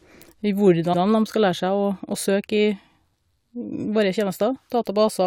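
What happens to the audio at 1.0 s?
Between 0.93 and 1.01 s the speech stutters because of repeated frames: a block of about 85 ms of compressed audio, which fits a run of four frames, was written or sent twice, so the decoder plays the same stretch of speech once more before moving on. The result is a short, audible hiccup where the sound jumps back and repeats itself, and the clip runs 85.3 ms longer than it should.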